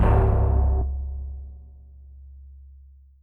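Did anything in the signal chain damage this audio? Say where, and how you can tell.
Yes. A skip ahead at 0.81 to 0.83 s shows damage at the network and jitter-buffer stage. The sound jumps forward with no gap and no fill, and the two sides of the cut butt together almost directly. Roughly 0.7 s of audio is missing, and the playout delay falls by about the same amount. A block of audio was discarded, either in transit or when the receiver's buffer overflowed, while later audio was already queued.

A jitter buffer speed-up follows from 0.90 to 1.59 s. Over that stretch the sound plays at about 111% speed while its pitch stays unchanged, so it comes across as hurried. The buffer was holding more audio than its target, so the receiver repeatedly cut out short pieces of one or a few pitch periods. Together those cuts remove roughly a tenth of a second, which brings the latency back down.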